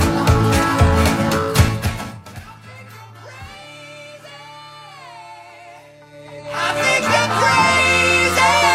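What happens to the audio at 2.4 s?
At 2.4 s a level drop of about 25 dB is finishing, applied in unsmoothed 2 dB jumps, roughly fifteen a second, from 1.58 s to 2.42 s. Each jump clicks, so zipper noise ticks over the sound as it fades.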